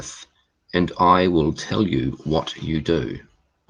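No technical faults can be heard in the speech. It comes through a WebRTC call path, where the codec's coding leaves the top end rolling off around 12 kHz, consistent with Opus at a moderate call bitrate.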